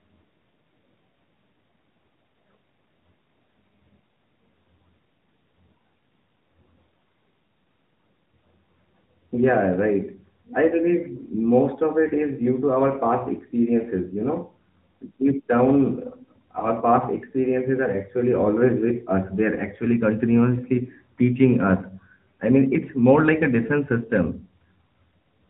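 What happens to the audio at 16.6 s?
Around 16.60 to 16.68 s there's a lost AMR speech frame, just before "past experiences are actually". It sounds like a single 20 ms frame went missing, so the decoder papered over it by reusing the last good pitch and vocal tract settings at reduced gain. You hear a quick dip or warble. It's all sitting on top of the AMR narrowband mobile codec that runs through the clip at 10.2 kbps: nothing above 4 kHz and a plainly buzzy, synthetic edge.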